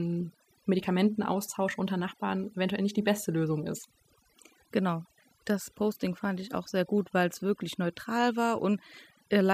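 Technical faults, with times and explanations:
Throughout, overdone noise removal: the background drops and breaks up into twinkling specks. A noise reducer pushed too hard mutes individual bands near its noise estimate, taking quiet speech detail too. Unlike low-bitrate coding, the artefacts cluster where the noise used to be.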